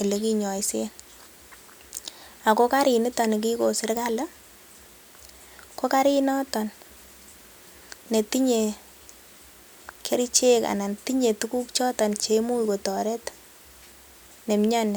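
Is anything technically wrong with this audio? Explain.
No, nothing stood out as technically wrong on listening to this speech recording.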